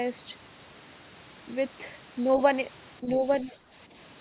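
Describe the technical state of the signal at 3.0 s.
At 3.0 s the speech starts to dip. From 3.01 to 3.24 s the level sinks in uneven patches, around 5 dB at its deepest and about 150 ms in all, so the talker briefly sounds pulled back. This is speech suppressed in double talk, likely because both ends spoke at once and the echo canceller, unable to separate the near talker from the far-end echo, turned both down.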